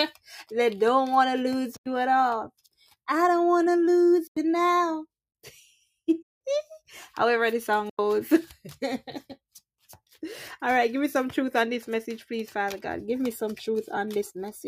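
Blocks of digital silence at 1.77–1.86 s, 4.27–4.37 s, 6.22–6.41 s and 7.90–7.99 s: the output buffer went unfilled and dropped to silence. Each cut leaves a short hole. The 93 ms gaps fit a 4096-sample buffer, and the 186 ms gap fits two.

Sound cut by the noise suppressor between 2.59 and 3.08 s: it mistook the sound for noise and pulled it down by up to about 10 dB, dulling roughly 150 ms in total.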